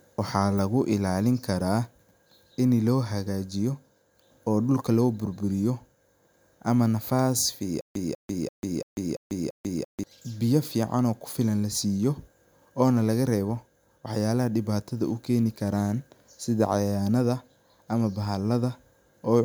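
A speech recording in which, from 7.81 to 10.04 s, right after "ama nafas", the sound catches on a fragment of about 195 ms and repeats it six times. Each repeat is followed by about 144 ms of dead digital silence, giving an even stammer every 339 ms, before normal playback resumes at "biyo fican oo kufilan". This is a stutter with silent gaps, likely from a stalled player or stream that replayed its last buffered chunk at each retry and then ran dry. The audio meant for that stretch never arrives.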